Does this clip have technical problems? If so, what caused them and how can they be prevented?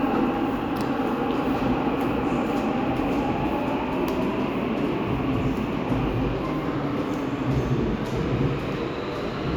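No, nothing stood out as a technical problem on listening to these sounds, so there is no cause to trace and nothing to prevent.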